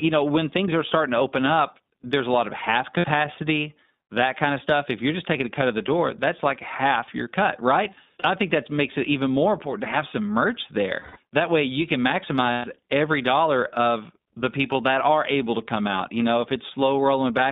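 Thin, telephone-band speech running from about 150 Hz to 3.7 kHz throughout, with a plainly audible rough, slightly synthetic texture. That is the iLBC codec at a rate that fits its 15.2 kbps mode, which codes each short frame independently and passes nothing above the narrowband limit. Four brief stretches turn into a held, faintly buzzy vowel: at 2.98 s after "a lot of half" (60 ms), at 8.20 s between "half your cut right" and "think that makes it" (40 ms), at 11.00 s after "to have some merch" (160 ms, fading), and at 12.52 s (120 ms). These are lost iLBC frames. The decoder repeats the last pitch cycle with added noise, consistent with 20 ms frames, and the sound recovers immediately afterward.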